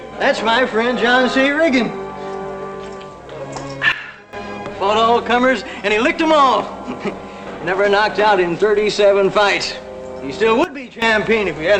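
Sudden gain jump at 3.92 to 4.33 s and again at 10.64 to 11.02 s: the audio and its background noise drop together by about 14 dB and about 15 dB, then return, most likely from a gain change applied between samples without any ramp.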